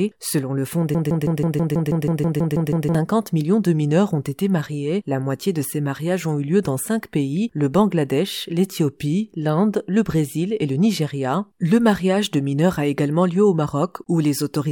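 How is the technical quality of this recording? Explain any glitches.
The recording has one clear glitch. From 0.95 to 2.95 s, a broken-record loop repeats a 162 ms fragment twelve times back to back, exactly identical, likely from a stalled player or stream. Unlike echo, nothing decays, and the audio that should have played is lost.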